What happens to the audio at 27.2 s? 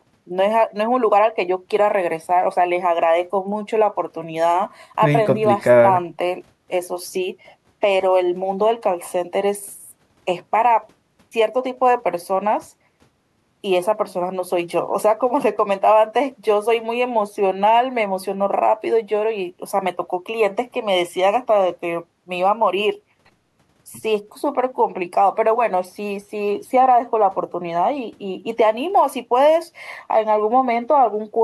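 Nothing goes wrong at 27.2 s; the speech carries on intact through that moment, with no dropout, click or distortion to be heard.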